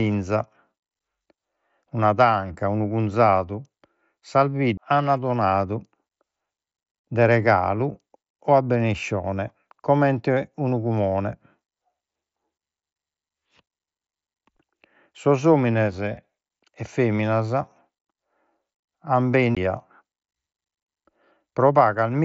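At 4.77 s and again at 19.55 s, CD skips: the laser jumps tracks, giving a brief muted tick and an abrupt jump to another point in the speech.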